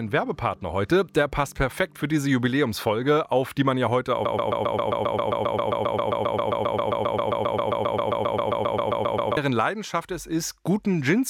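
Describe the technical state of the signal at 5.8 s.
At 5.8 s the signal is inside a broken-record loop running from 4.25 s to 9.37 s. A 133 ms fragment repeats exactly, back to back, about 38 times, replacing the audio that should play there. The likely cause is a stalled player, encoder or stream resending its last buffered fragment.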